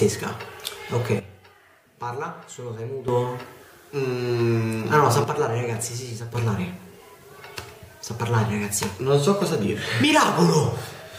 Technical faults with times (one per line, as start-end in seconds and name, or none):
1.19-3.08 sudden gain jump
5.24-6.35 sudden gain jump